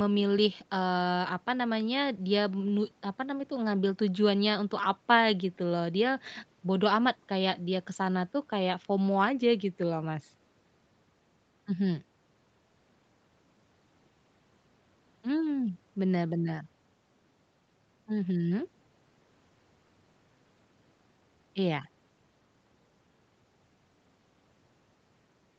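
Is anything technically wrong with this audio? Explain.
No, nothing is technically wrong: this is speech carried over a call connection, with the microphone processing and the Opus call path working as intended, and one audible trace is the normal band limit that leaves nothing above 8 kHz.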